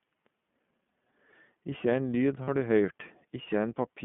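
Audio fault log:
Throughout: iLBC codec. The audio is narrowband, held between about 150 Hz and 3.4 kHz, so it sounds thin and boxed in. The coding damage is plainly audible. There is a rough, slightly synthetic grain on every syllable. The codec rebuilds each short block on its own, with no help from the one before. The sound fits iLBC's 20 ms frame mode at about 15.2 kbps.
0.88 s and 2.44 to 2.49 s: lost iLBC frames. Each spot has a brief smeared tone in place of the real sound. The first lasts about 20 ms. The second, just after "ein lyd", lasts about 40 ms, which fits two missing frames. The decoder fills each gap by repeating the last pitch cycle mixed with noise. That gives a short, held, buzzy vowel. The frames stand alone, so the sound recovers at once.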